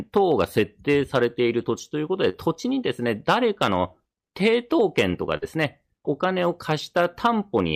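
Hard clipping runs throughout: the speech is driven about 7 dB past what the chain can pass, so a small fraction of peaks are cut flat and crackle.

Short concealed packet loss at 2.29 to 2.48 s: roughly 40 ms never arrived, and about 44 ms of continued sound fills it, heard as a brief smear.

A burst of packet loss at 5.37 to 5.56 s drops about 40 ms; the receiver extends the last sound for 45 ms, fading it, before resuming further on.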